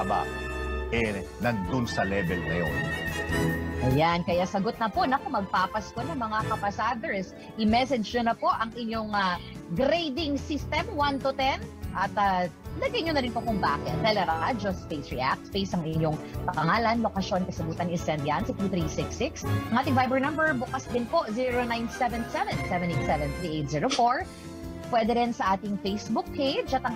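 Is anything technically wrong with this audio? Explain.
No, nothing here stands out as a technical problem; the audio just sounds the way it should all the way along.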